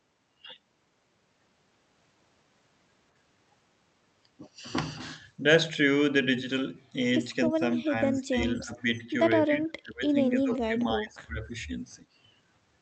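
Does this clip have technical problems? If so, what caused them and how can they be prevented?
Yes. From 7.49 to 11.55 s the speech keeps getting pushed down in chunks, at 7.49–8.37, 8.63–9.10, 9.47–10.16, 10.43–10.80 and 10.96–11.55 s, dipping by about 15 to 20 dB. That pattern is likely speech suppressed in double talk: the far end was talking too, and the echo canceller, unable to tell this talker from its own loudspeaker echo, ducked everything. A better-tuned echo canceller with proper double-talk detection, or a headset to remove the echo, would prevent it.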